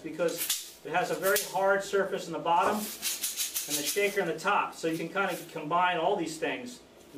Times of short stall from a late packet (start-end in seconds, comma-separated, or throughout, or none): none